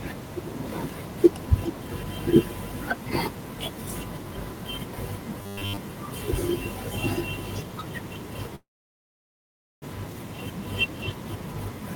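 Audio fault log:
5.38–5.77 s: robotic sound from repeated short buffers. The speech collapses into a stiff, metallic buzz at 100 Hz that still roughly tracks the talking. This likely comes from audio arriving too slowly, so the software kept replaying the last 10 ms of signal. Most of this stretch is repeated material rather than real audio. The fixed loop length imposes its own pitch.
8.55–9.84 s: call audio freeze. The sound stalls, a brief tail carries on, then about 1.18 s of silence follows. Packets were likely held up in transit until the jitter buffer emptied, so the receiver padded the wait. When delivery resumed, the speech picked up exactly where it stopped, with nothing lost. The cost is timing: everything after this point arrives about 1.27 s later than before.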